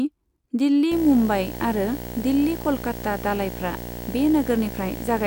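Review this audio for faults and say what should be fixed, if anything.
From 0.91 s to the end at 5.27 s the speech carries a video or display buzz: a steady 59.94 Hz field-rate buzz with hash above it, plus a thin whine at the 15.7 kHz line rate. It sits only about 10 dB below the speech. A monitor or video cable is coupling into the audio path, injecting both the field-rate and line-rate energy. To prevent it, route audio cables away from screens and video leads, use balanced connections, and keep display and audio gear on a shared ground point.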